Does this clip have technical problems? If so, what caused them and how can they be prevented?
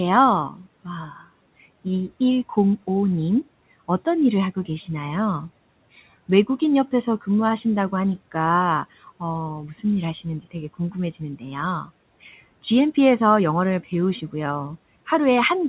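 Yes. There is speech cut by the noise suppressor at 0.5 to 0.65 s and 1.04 to 1.3 s. It dips about 8 dB, then about 16 dB, because it was mistaken for noise. A gentler suppression setting would keep quiet speech intact.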